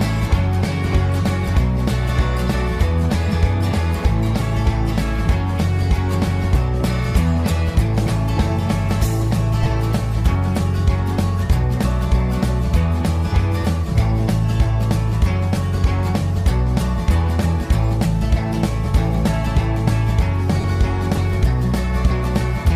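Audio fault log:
9.63–9.66 s and 20.61–20.64 s, lost LE Audio frames: two brief gaps, 22.5 ms and 30 ms long, where the LC3 decoder received no data and concealed the hole by reusing the last good spectrum with randomised signs. Tonal content turns momentarily into a grainy, noisy smear rather than clean silence. The lengths fit runs of three and four 7.5 ms frames, short enough that the concealment fade-out barely begins before normal decoding resumes.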